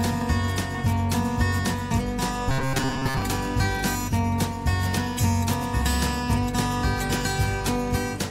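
From 2.49 to 3.22 s, new audio likely arrived too seldom, so playback kept repeating a short buffer of about 7.5 ms across most of that stretch. This robotic sound from repeated short buffers produces a rigid, metallic buzz at 133 Hz.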